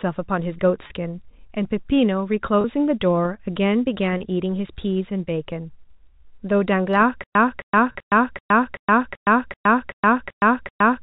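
Packet loss with pitch repetition at 0.87, 2.61, 4.17 and 7.92 s: each 30 ms gap, consistent with a single lost packet, is bridged by repeating the last pitch period, heard as a briefly held, buzzy tone. A stutter with silent gaps begins at 7.24 s and runs to the end. The same 267 ms fragment replays ten times, each followed by 116 ms of digital silence, every 384 ms. This is likely a stalled stream retrying, and the intended audio in that span is lost.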